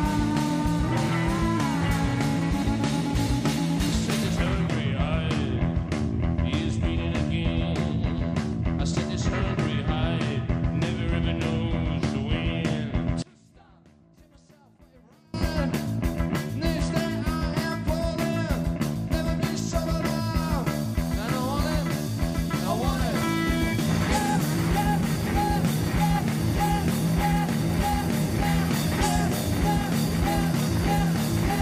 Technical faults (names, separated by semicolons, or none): one channel inverted